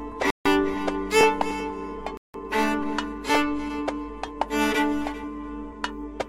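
The music drops out twice, at 0.30 to 0.47 s and again at 2.17 to 2.35 s, each time into a clean gap of about 151 ms and then 169 ms before carrying on. That stop-start pattern points to a Bluetooth stall, most likely radio interference delaying packets until the headphones' buffer emptied. Playback then sat silent until the resent data arrived. You hear it as an abrupt hole in the music rather than a fade.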